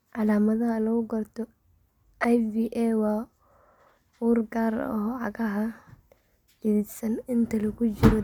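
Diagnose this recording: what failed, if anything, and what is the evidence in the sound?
Nothing failed; no fault is audible in this recording.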